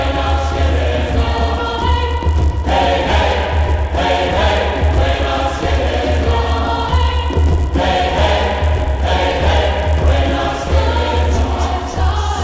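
Right through the clip, a 100 Hz buzz follows the sound. The resampler restarted on every block, so each 10 ms block edge picks up a small error.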